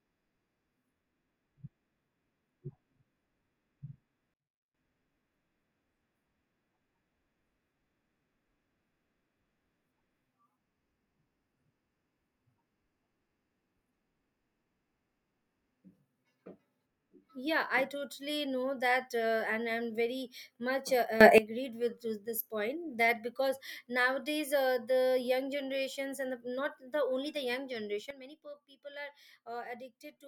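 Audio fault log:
4.34–4.74 s, 21.21–21.38 s, 28.11 s to the end: sudden gain jump. The speech and its background noise step together, down about 22 dB, up about 17 dB, then down about 12 dB, with no ramp. That's likely a digital gain setting applied instantly.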